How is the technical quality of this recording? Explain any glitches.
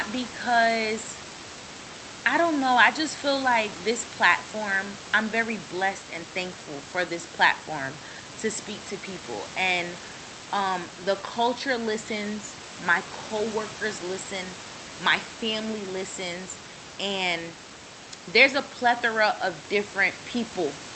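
Nothing in the recording counts as a glitch: room noise sits about 11 dB below the speech with a fainter layer some 32 dB down, and the Opus call path keeps the audio band-limited to 8 kHz as expected.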